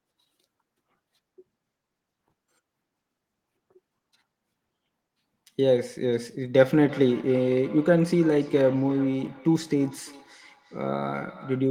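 From 6.59 s to the end, feedback echo between two devices, where one microphone re-captures the other's playback, repeats speech about every third of a second, about 19 dB down, as faint trailing spectrogram copies.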